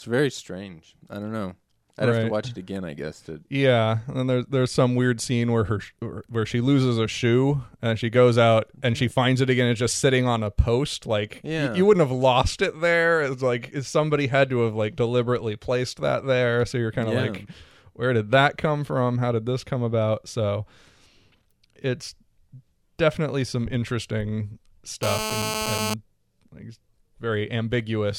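Speech, with a GSM phone buzz from 25.03 to 25.94 s: a steady, raspy 217 Hz buzz about 4 dB below the speech, from a nearby phone on a call whose radio bursts the audio circuit rectified. A spectrogram shows evenly stacked horizontal harmonic lines.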